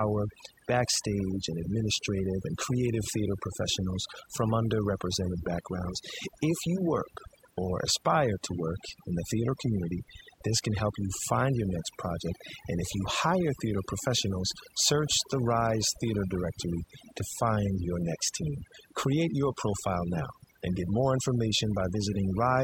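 Overdone noise removal runs throughout the speech. The noise reduction was set too aggressively, pulling individual frequency bands down or out whenever they sat near its noise estimate, taking quiet speech detail with them. Pauses fall to near silence with twinkling specks.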